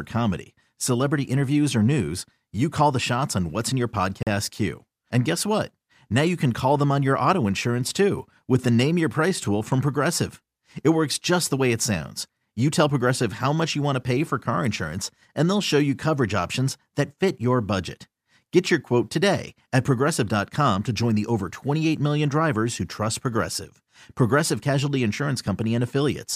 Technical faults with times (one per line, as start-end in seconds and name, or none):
4.23-4.27 Bluetooth stall